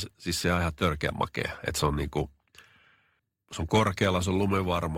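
At 1.08 s the adaptive stream switches to a lower bitrate and stays there to the end, with the sound pointing to a step down from roughly 64 to 24 kbit/s Opus. With no gap, the speech abruptly takes on more audible codec artefacts.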